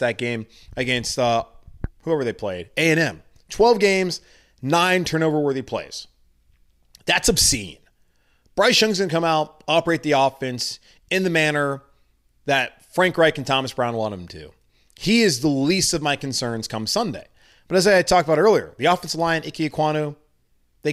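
No technical faults are audible.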